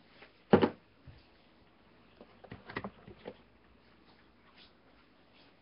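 Nellymoser compression runs through the whole clip, and the sound is most likely coded with Nellymoser Asao, the old Flash microphone codec. The audio has a rough, hissy halo and a smeared, underwater character, and nothing reaches above 5.3 kHz. Coding works in short fixed blocks at a low, fixed bit budget, which fits a rate around 22 kbps. Weaker bands get no bits and are filled with noise, which causes the heavy grainy damage.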